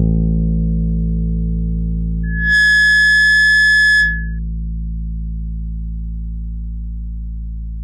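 From 2.23 s to 4.39 s a loudspeaker feedback squeal takes over: a microphone re-amplifies its own loudspeaker until a single 1.7 kHz tone runs away, swelling within about a third of a second to roughly 10 dB above the sound. Unlike a steady interfering tone, it grows by itself.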